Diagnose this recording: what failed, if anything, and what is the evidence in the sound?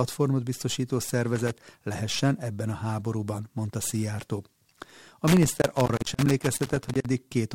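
The failure is in the analogue wiring: loose connector crackle. A short irregular burst of crackle runs from 1.35 to 1.51 s, and a much longer one from 5.28 to 7.06 s. A worn or dirty contact is making and breaking as it shifts, chopping the speech and adding pops from any DC on the line. Unlike digital dropouts or buffer clicks, the scratching is ragged and unevenly spaced rather than clean, regular gaps.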